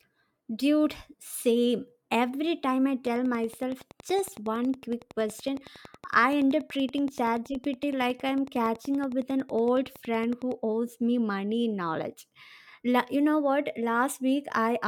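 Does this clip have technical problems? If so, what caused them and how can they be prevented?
Yes. From 3.07 s to 10.53 s, starting after "time I" and running until "owes me money in", a train of clicks ticks over the speech at a steady 10.7 per second, around seventy in all, each roughly as loud as the speech and audible in the pauses too. The near-identical shape and even spacing set it apart from random crackle or isolated pops, and likely point to interference from nearby equipment or a faulty connection or power supply. Keeping cables away from other electronics and using a stable, well-powered interface should prevent it.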